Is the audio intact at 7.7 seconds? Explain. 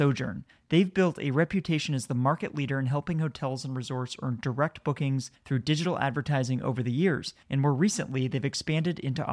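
Yes, at 7.7 seconds the audio is intact, with no fault present at that moment.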